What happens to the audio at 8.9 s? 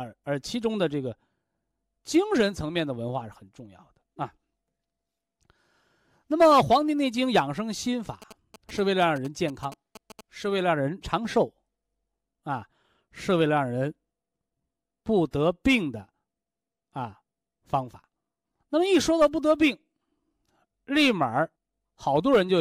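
GSM signalling bursts run from 8.22 to 10.21 s. A nearby 2G phone's radio bursts are rectified, giving a galloping dit-dit-dit of short 217 Hz buzzes well below the speech.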